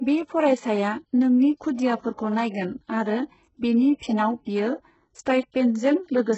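Right from the start, the whole recording has that metallic, synthetic top end you get when the treble is rebuilt rather than coded. It's likely HE-AAC compression doing spectral band replication: only the lower band is really coded, and the upper part is patched in from copies of it under a rough envelope. Nothing is present above 8 kHz, the damage is heavy, and the s sounds come out gritty and lispy. That all fits a starved bitrate around 8 kbps.

At about 2.15 to 2.19 s there's a pre-echo. A sharp attack lands late in a transform block, and the codec spreads the quantisation noise meant for the loud part across the whole block, including the quiet moment just before it. You hear a short hiss smeared about 32 ms ahead of the attack, and the onset itself loses its snap and sounds soft and blurred.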